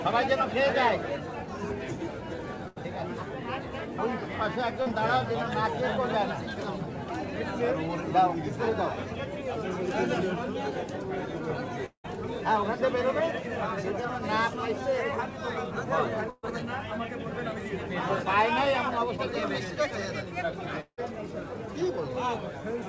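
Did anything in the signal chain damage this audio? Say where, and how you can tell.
Yes, the network stage damaged it in three ways. A burst of packet loss hits at 2.68–2.78 s and 16.30–16.45 s: the last sound is stretched into a fading buzz or hiss for about 80 ms and 130 ms, then resumes with that stretch missing. Unlike the dropouts, there is almost no silence before the sound returns.

Short concealed packet loss appears at 4.82–4.88 s and 19.17–19.20 s, where roughly 40 ms and 20 ms were never decoded. The receiver briefly continues the previous sound and blends back in, leaving a quick smear or wobble rather than an audible gap.

At 11.86–12.06 s and 20.81–20.99 s, the sound is held and fades for about 180 ms and 170 ms, then falls to near-silence for about 80 ms and 60 ms before the audio returns. That trailing silence marks these as a long network dropout, likely a stall in packet arrival. 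Throughout, the G.722 call codec limits content to below 8 kHz.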